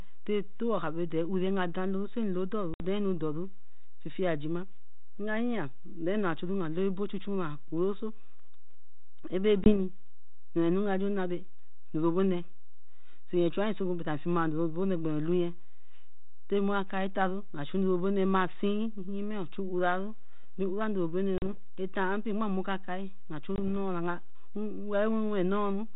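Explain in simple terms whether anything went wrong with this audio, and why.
Yes, two things went wrong. There is packet loss on an ADPCM call: bits of the phone signal never arrived, at 2.74 to 2.85 s, 9.64 to 9.74 s, 21.38 to 21.49 s and 23.56 to 23.62 s. Each gap sounds like a sudden cut, followed by speech returning slightly rough for a moment while the decoder catches up.

There is also a DC offset: the whole recording sits shifted away from its centre line. You cannot hear it, but it wastes some of the loudness room.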